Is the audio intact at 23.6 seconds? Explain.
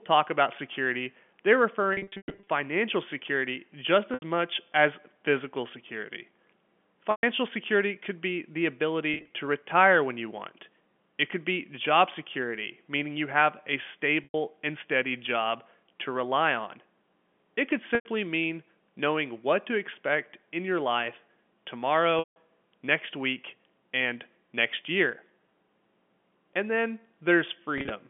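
Yes, the audio is intact at 23.6 seconds, with no fault at that moment beyond the narrow 200 Hz to 3.4 kHz band of the G.711 telephone line it travels over.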